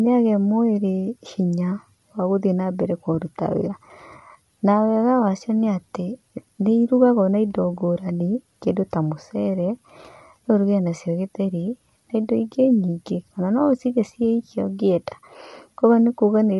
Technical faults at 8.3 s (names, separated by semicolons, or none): low-delay AAC compression